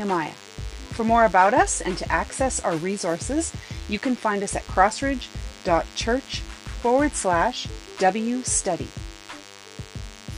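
A DECT cordless phone buzz runs through the whole clip. A nearby DECT handset or base station sends a radio burst every 10 ms. The audio circuit rectifies it. The result is a steady, thin 100 Hz buzz, rich in harmonics, sitting about 20 dB below the sound.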